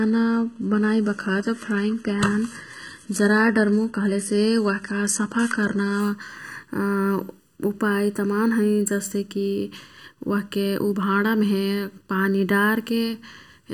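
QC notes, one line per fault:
throughout: channel delay (comb filtering). One channel runs behind the other by a bit under a millisecond, and once they're folded to mono the shared parts cancel at evenly spaced frequencies. The first notch sits somewhere around 700 Hz and the rest repeat up the spectrum at odd multiples of it. That's why the speech has that hollow, slightly phasey, boxy colour from start to finish, and why it never changes.
0.0–6.0 s: adaptive stream starting at a low bitrate. The player clearly opened on a low rung to get going fast. The top end sounds thin and synthetic, with nothing above about 11.8 kHz, and the papery, smeared quality you get when HE-AAC rebuilds the highs at something like 16 kbit/s. At 6.0 s it jumps straight to a much cleaner rung that fits AAC-LC around 96 kbit/s. The switch is abrupt but leaves no gap.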